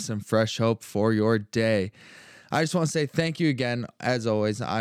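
Nothing in this recording trips up the ear at any point, with no technical faults to report along the way.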